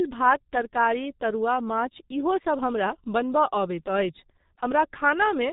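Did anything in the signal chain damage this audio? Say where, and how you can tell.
Yes, the damage is at the codec stage: G.723.1 coding throughout the speech. Nothing passes above 3.8 kHz, and consonants smear into a hoarse, muffled texture, which points to roughly 6 kbit/s. A plain low-pass filter would dull the top without this rough, slow-updating voice model.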